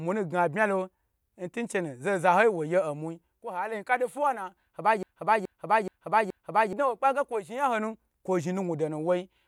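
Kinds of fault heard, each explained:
Broken-record loop: from 5.03 to 6.73 s one 0.42 s piece of the speech repeats exactly four times, back to back, replacing what should have played, likely from a stalled player or stream resending its last fragment. Unlike an echo, the repeats neither fade nor overlap.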